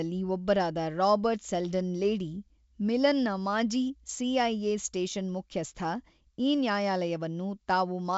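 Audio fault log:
No faults are audible in this speech clip. The G.722 wideband telephone coding path carries the sound out to about 7 kHz, which fits the full 64 kbit/s mode, and any trace it leaves in the upper band is faint at most.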